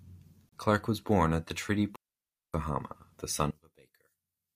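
At 0.49 s the speech breaks for about 33 ms, up to 0.52 s. This is a gap between stream segments. Two segments' time stamps fail to meet, and the player fills the space with silence. The hole has hard edges. No speech is lost.

Just after "born at the treaty", at 1.96 s, the sound cuts out until 2.54 s. That is a digital wireless dropout lasting about 580 ms. The link lost too much data, so the receiver muted with a very short fade. The hole is clean, near silent, with no noise burst.

From 3.51 s, just after "the son", to the end, the speech drops by about 30 dB and turns faint. The likely cause is one channel inverted. Reversed polarity on one side cancels the centred voice when the channels are summed to mono.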